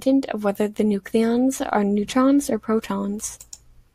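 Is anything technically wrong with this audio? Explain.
No, nothing is technically wrong with this audio.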